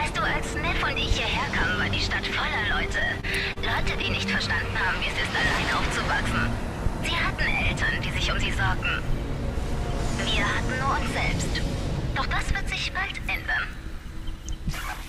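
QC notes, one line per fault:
2.87–4.05 s, repeated stalls (stutter): late packets emptied the jitter buffer eight times; gaps up to 29 ms were filled by extending sound, so audio drags and stutters without loss.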